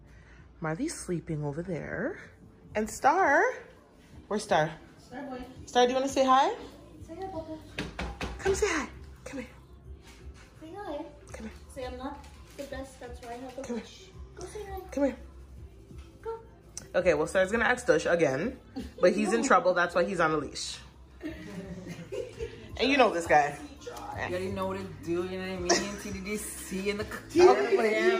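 No technical faults can be heard anywhere in the audio.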